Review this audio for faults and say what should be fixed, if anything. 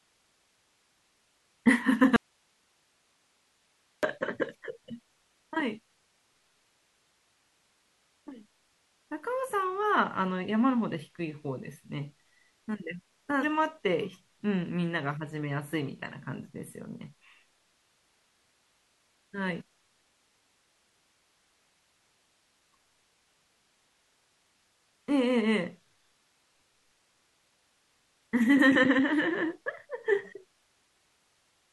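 From 2.16 to 4.03 s the speech cuts out abruptly for nearly 1.9 s, an audio dropout to a faint residue. Only hiss remains, around 45 dB below the speech. The hiss rather than dead silence shows the later path stayed live, likely a momentary break at the source connection. The hard edges set it apart from a pause or fade. Securing connectors and monitoring the input level while recording would prevent it.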